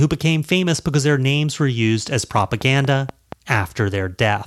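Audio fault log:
2.38–3.33 s, train of clicks: just after "names were used as", a regular ticking of about five near-identical pops at 4.2 per second rides over the speech, peaking roughly 10 dB above it, likely from nearby equipment interference or a faulty connection injecting repeated pulses.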